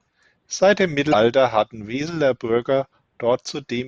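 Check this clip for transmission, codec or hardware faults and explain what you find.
There's one fault here, from 1.09 to 1.15 s: a brief burst of damaged data in a compressed stream. Some of the encoded bytes in that stretch are corrupted, so the decoder misreads those frames, loses its place in the bitstream and has to hunt for the next valid frame header before it can carry on. For about 50 ms the speech is replaced by a short, harsh chirp or blip, and then it picks back up.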